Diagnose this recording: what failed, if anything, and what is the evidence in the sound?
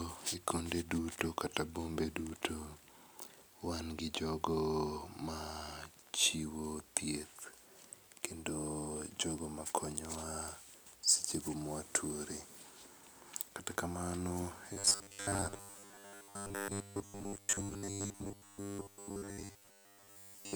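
From 14.73 s to 20.55 s the speech turns into robotic sound from repeated short buffers: a fixed metallic buzz at 100 Hz that still loosely follows the words. This fits a 10 ms chunk replayed for most of the stretch, likely buffer starvation at the driver stage. Codec warble would not hold one steady pitch.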